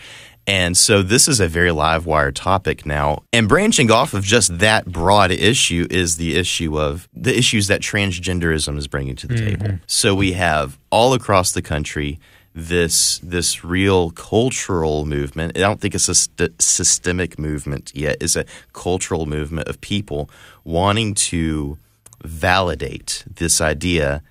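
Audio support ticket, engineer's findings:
No audible faults found; audio path behaving as expected.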